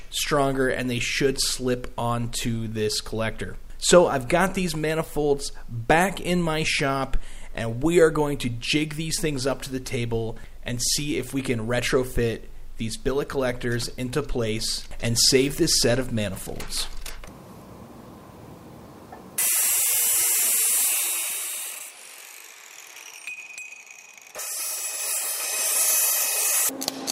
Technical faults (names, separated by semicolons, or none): none